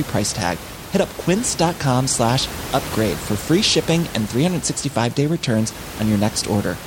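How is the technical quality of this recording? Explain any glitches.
No technical faults are audible.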